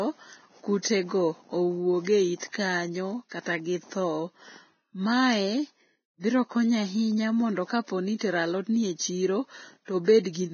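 A dull, grainy hiss sits over the whole of this speech recording. The treble is gone above 6.5 kHz, and what remains of the upper detail has turned rough and noisy. That is likely heavy Vorbis compression at a very low rate, around 17 kbps. At that rate the codec cuts the top band and quantises the remaining high frequencies so coarsely that their fine structure is replaced by noise of similar energy. Five sharp onsets also arrive with a brief hiss ahead of them, and their attacks sound softened. This is pre-echo. It occurs at 2.04 to 2.07 s, at 2.39 to 2.42 s just after "owuog e", at 2.52 s, at 8.19 to 8.21 s between "mondo kapo ni" and "alodni e", and at 10.04 to 10.08 s. Each smear lasts roughly 20 to 35 ms. It arises because the coding noise is spread across a whole transform block, so the quiet stretch just before each attack inherits noise scaled for the loud onset.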